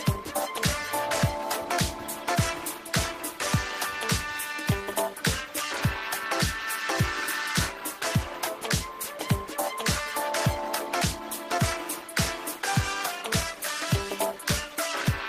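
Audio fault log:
No audible technical faults.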